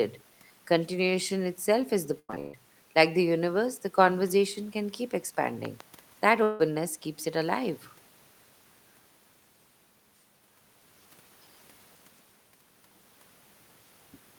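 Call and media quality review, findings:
Choppy, robotic speech, 2.19–2.55 s. Repeated packet loss: four gaps, longest 136 ms, about 72% of the span patched by stretching earlier audio.

Two sharp pops, 5.65–5.83 s, roughly 10 dB above the speech, which continues underneath. Loud pop, likely a voltage transient from a plug, switch, static or driver glitch.

Fading buzz in place of the speech, 6.43–6.61 s, about 160 ms lost. Long network dropout, likely: the receiver filled the hole by continuing the last sound, with no silence left.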